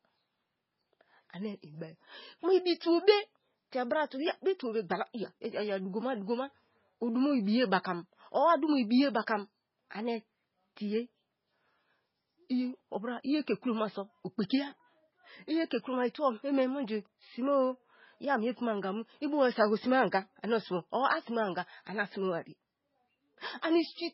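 From start to finish, the speech is dull and smeared. Nothing is heard above 5.5 kHz. Faint detail flickers in and out, giving a watery, swirling texture, and s sounds turn metallic. This is likely heavy MP3 compression, at a bitrate as low as 16 kbps.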